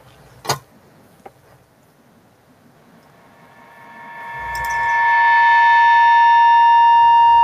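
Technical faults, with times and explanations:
2.75–7.43 s, feedback howl: microphone pickup of a nearby loudspeaker on the same call forms a loop that gains on each pass, so repeats grow rather than fade. It narrows to a tone around 1 kHz, pulsing roughly every fifth of a second, reaching about 23 dB above the speech and lasting to the end.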